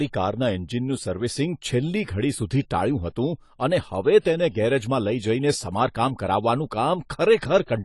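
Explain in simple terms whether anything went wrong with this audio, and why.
The speech has been squeezed hard by a lossy codec, likely AAC compression. Everything above 11.5 kHz is missing, so the voice sounds dull. The damage is plainly audible. Detail is thrown away to save space, leaving a smeared, fizzy texture.

There is also pre-echo from 4.20 to 4.25 s. A short hiss arrives about 45 ms before a sharp sound. The codec spreads its noise across a whole chunk of audio, so the noise leaks into the quiet moment just before the attack.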